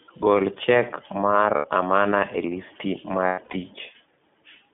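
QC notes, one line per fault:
Throughout: iLBC codec. The audio is confined to a narrow telephone band of roughly 150 Hz to 3.6 kHz, so nothing above it survives and the speech sounds boxy. Each 20 ms frame's excitation is coded on its own rather than predicted from the previous one, which leaves a plainly audible rough, slightly synthetic texture on the voice. The frame timing fits the 15.2 kbps mode.
1.56 to 1.66 s: lost iLBC frames. About 80 ms of speech, which points to four consecutive 20 ms frames, never arrived. The decoder filled the gap by repeating the last pitch cycle mixed with noise, so it sounds like a briefly held, faintly buzzy vowel. The speech recovers almost immediately afterwards because each iLBC frame decodes independently.
3.26 to 3.56 s: lost iLBC frames. Losses totalling about 200 ms are scattered over roughly 280 ms, the longest unbroken gap being around a tenth of a second. 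The concealment repeats the pitch cycle with added noise and fades it over the longer run, producing a breathy, stuttering stretch where real speech and held vowel alternate.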